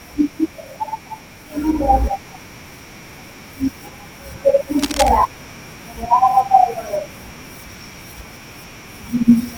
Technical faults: cable scratch noise

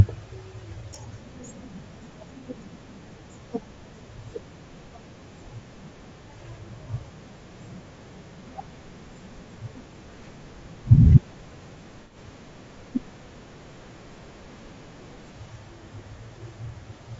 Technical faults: low-delay AAC compression; AAC frame loss with concealment

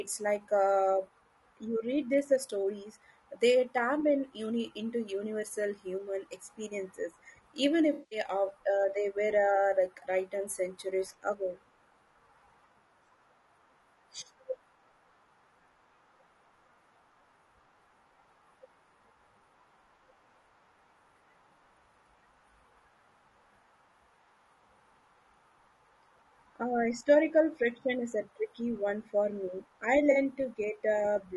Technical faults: low-delay AAC compression; AAC frame loss with concealment

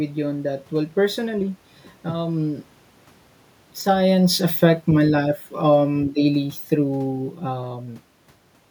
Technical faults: automatic gain falling

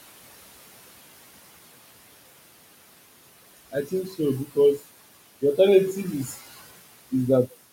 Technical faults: noise suppressor artifacts; speech cut by the noise suppressor

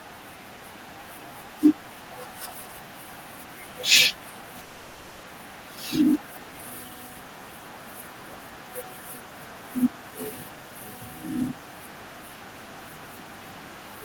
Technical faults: long network dropout

